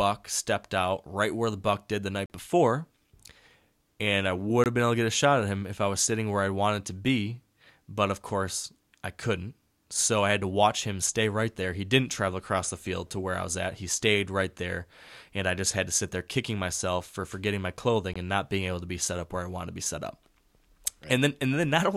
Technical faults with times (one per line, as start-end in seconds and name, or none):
2.26-2.30 Bluetooth dropout
4.64-4.66 Bluetooth dropout
18.14-18.16 Bluetooth dropout